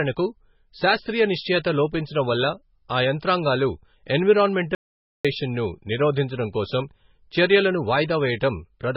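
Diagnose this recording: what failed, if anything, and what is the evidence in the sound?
Codec stage: likely MP3 compression at a very low bitrate, fitting about 16 kbps. Nothing survives above 5.5 kHz throughout, and the speech sounds heavily watery and swirly.

Input or link stage: the signal was likely lost, causing an audio dropout to silence from 4.75 to 5.25 s. The speech cuts to silence for half a second, with no room tone.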